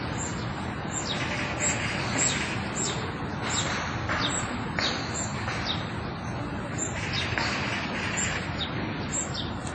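From the start and all the way through, there's a steady buzz at about 43.1 Hz that rises and falls with the sound's level. That's a filter restarted on every block: it drops its state and begins each block from silence, leaving a small click at each boundary. The rate fits a 1024-sample block.

Running alongside it for the whole clip is plainly audible codec damage. Nothing reaches above 8.9 kHz, and there's a ringing, washy smear with hiss that breathes along with the sound. That's likely WMA compression, the first-generation encoder at a low bitrate, something like 32 kbps, where weak detail gets zeroed and quantisation noise spreads across long blocks.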